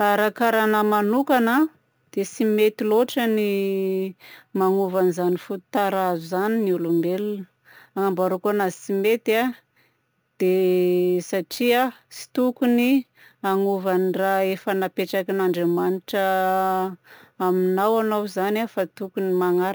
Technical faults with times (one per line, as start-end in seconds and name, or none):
0.00-19.75 imaging from sample-and-hold upsampling